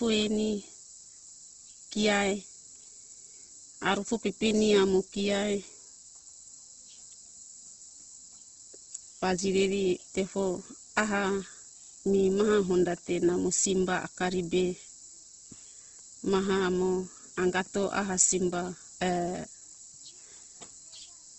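From start to finish the speech carries Opus compression damage, and it's plainly audible. Nothing reaches above about 8.1 kHz, so the top end is cut off flat, and within that band the sound has a rough, grainy texture, with tonal parts going noisy rather than clean. That's most likely the encoder starving for bits and filling bands with folded or noise-like content, which fits its music mode running at around 16 kbps.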